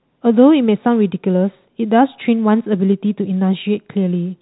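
Nothing technically wrong can be heard in this speech recording. It carries the narrow sound of G.711 telephone coding, with nothing reaching above about 3.9 kHz.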